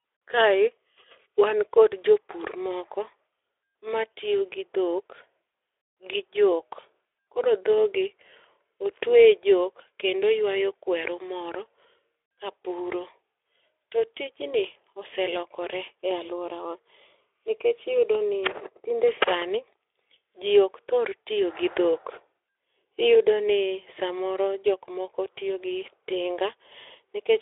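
Speech carried over a Speex codec path working normally, confined to a telephone-style band of roughly 300 Hz to 3.5 kHz with nothing above about 3.8 kHz, its light coding texture consistent with a setting around 15 kbps, and no faults present.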